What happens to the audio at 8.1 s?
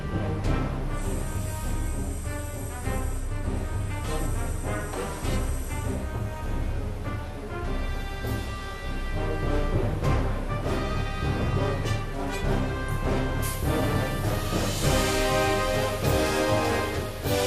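At 8.1 s the sound is dull and gurgling, with a granular grit and upper frequencies flickering in and out, as it is across the whole clip. This is likely MP2 compression starving its 32 sub-bands of bits, which fits a rate near 80 kbps.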